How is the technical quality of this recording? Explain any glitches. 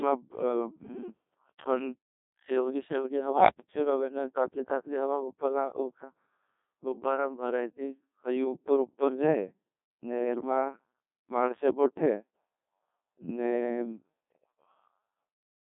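Pretty rough: the whole recording has gone through the Codec 2 vocoder. Instead of carrying the waveform, it sends only pitch, voicing, energy and a spectral envelope, then rebuilds the speech from sine waves. The result is heavily damaged, buzzy and robotic, with the band squeezed to about 250 Hz to 3.6 kHz. That thin, synthetic sound points to a very low rate, around 1.2 kbit/s.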